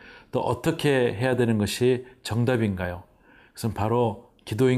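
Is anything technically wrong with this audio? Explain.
No, nothing technically wrong can be heard in this speech recording; the signal stays intact and continuous throughout.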